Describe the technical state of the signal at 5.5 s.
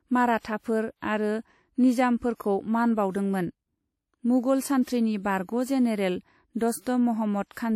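At 5.5 s the speech has a ringing, washy edge, with a hiss that swells and fades along with the voice, and that runs through the whole clip. It's likely WMA compression at a fairly low bitrate: long transform blocks smear quantisation noise over tens of milliseconds and zero out weaker detail.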